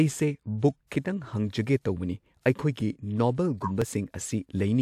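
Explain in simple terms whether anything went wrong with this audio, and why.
Small clicks or stutters turn up in the speech at 0.80, 1.80, 2.81 and 3.82 seconds, almost exactly one second apart. This is overlapping chunks. The audio was handled in one-second pieces, and each new piece started slightly before the previous one finished, so about 6.5 milliseconds of sound played twice at every join. That tiny repeat breaks the smooth flow of the waveform, and the steady spacing is what gives it away.

From 3.62 to 3.71 seconds there is a brief squeak or burst of noise that doesn't belong to the speech. This is a corrupt frame decoded. The audio was stored in compressed blocks, and a few of them were damaged. The player used them anyway and misread the values inside, which put sound at the wrong pitches for roughly a tenth of a second, the length of those few damaged blocks.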